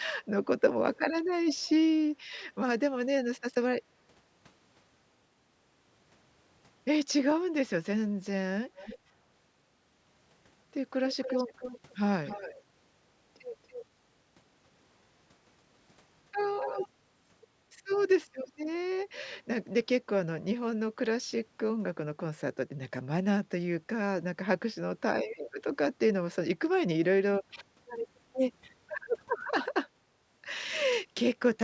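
A delayed copy of the speech, an echo leak, surfaces at 0.95, 1.51, 8.75, 11.09, 12.25, 13.67 and 16.6 s, lagging about 322 ms at first, then 282 ms, likely from an incompletely cancelled loudspeaker path. Unlike room reverberation, it's a discrete repeat rather than a smooth decaying tail.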